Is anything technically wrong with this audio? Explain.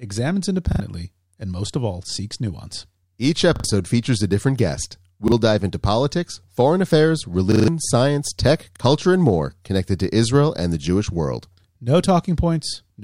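Yes. Repeated buffer faults occur at 0.72–0.80 s, 3.56–3.64 s, 5.28–5.32 s (between "features a different guest" and "dive into politics foreign"), 7.52–7.68 s (after "into politics foreign affairs", before "science tech") and 8.76–8.80 s (after "science tech", before "and more connected to"). Fresh audio did not reach the output in time, so the last 40 ms block was replayed: once at 5.3 and 8.8 s, twice at 0.7 and 3.6 s, and four times at 7.5 s. Each replay joins abruptly and is heard as a short stutter, and the speech that should have played there is lost, a little under a sixth of a second at 7.5 s.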